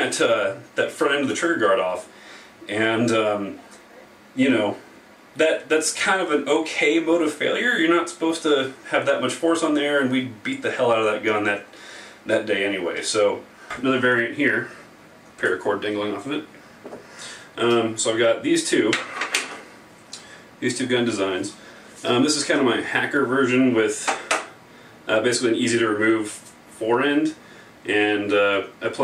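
No technical faults can be heard anywhere in the audio.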